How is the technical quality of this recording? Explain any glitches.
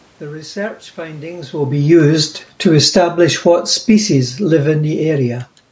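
The recording has one recurring glitch, automatic gain falling, in two stretches. From 1.77 to 3.11 s, just after "research findings will be", the level sinks by about 8 dB, and from 3.75 to 5.49 s it drops by about 3 dB more, with the room's background noise sinking along with the speech. The automatic gain control judged the input too loud, or its background noise too strong, and lowered its gain gradually, which pulls down everything in the signal together. The earlier change in level around 1.5 s comes from the talker moving relative to the microphone, not from the system, and the absence of content above 8 kHz is the normal band limit of the call's microphone processing.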